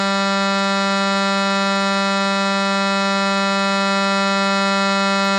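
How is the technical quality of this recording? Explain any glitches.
Technical quality is poor, with plainly audible codec damage throughout the music. Nothing is present above 11.9 kHz and the sound is watery and swirly. This points to likely MP3 compression at a starved bitrate, around 37 kbps, which truncates the treble and toggles weak frequency lines frame to frame.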